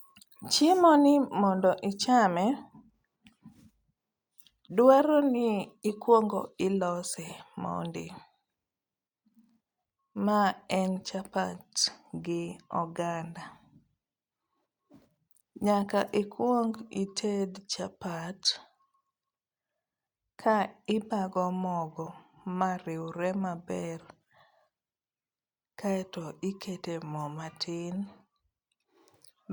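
Nothing stood out on listening to this speech recording.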